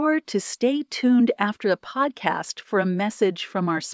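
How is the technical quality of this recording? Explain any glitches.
No technical faults can be heard in the recording; the speech signal stays continuous and stable throughout.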